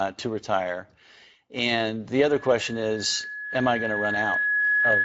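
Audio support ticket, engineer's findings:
Speex codec damage, whole clip. Speech sounds hoarse and grainy. Too few bits for the CELP excitation, which fits a mid-quality wideband Speex setting around 16.8 kbps. Nothing above 7.7 kHz. The top band sounds like shaped hiss rather than real detail, which is typical of Speex filling the upper band instead of coding it. Probable component: VoIP or chat encoder.

Loudspeaker feedback squeal from 2.23 s to the end of the clip. A single tone at 1.7 kHz swells steadily and is still rising when the clip ends, finishing about 5 dB above the speech. The loop gain of the microphone and loudspeaker exceeds one at that frequency, so the tone reinforces itself with each pass. Probable component: open speaker output reaching the microphone, with no echo cancellation or feedback suppression active.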